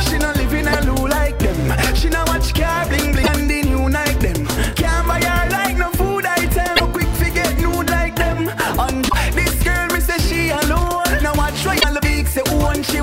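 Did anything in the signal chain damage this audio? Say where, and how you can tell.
Yes, the damage sits at the codec stage: it's damaged data in the compressed stream. You get five short glitches, at 0.69–0.75 s, 3.20–3.29 s, 6.73–6.81 s, 9.05–9.14 s and 11.77–11.84 s, each lasting roughly 60 to 85 ms. Those brief disruptions are what you hear when bad bytes land in the bitstream. The decoder misreads those frames, loses sync, and produces garbage until it locks onto the next valid frame header.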